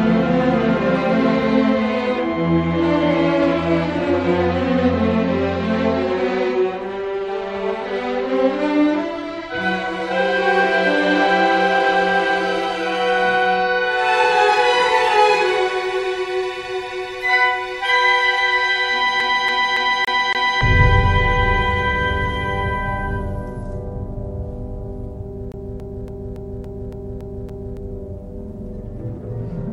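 From 19.20 to 20.61 s, and again from 25.52 to 27.77 s, the CD sticks on one turn: a scratch throws the laser back a track, replaying the same 0.28 s slice five, then eight times, with a brief mute at each jump. That even, rapid stutter separates it from irregular dropouts.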